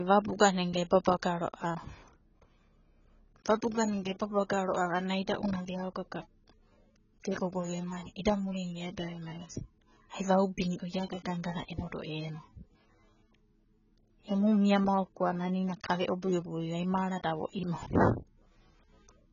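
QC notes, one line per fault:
Throughout, low-bitrate audio saved at a high bitrate. The speech has nothing above 7 kHz and keeps the dull, coded texture of a heavy first encode. The likely cause is a low-bitrate AAC file re-saved as high-bitrate MP3, which cannot restore what was removed.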